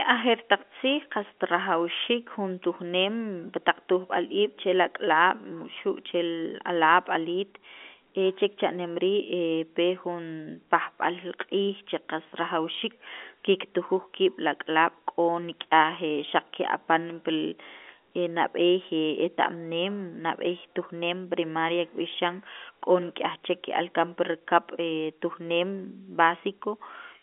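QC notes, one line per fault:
No faults; narrowband telephone speech, band-limited near 3.7 kHz.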